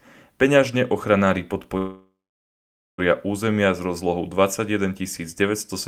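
A speech clip where the sound stalls at 1.77 s, the last fragment trailing off as a fading buzz or hiss into roughly 0.86 s of silence, then resumes at 3.00 s with "územia s rozlohou", nothing lost but 1.2 s added: a call audio freeze, likely from delayed packets draining the jitter buffer.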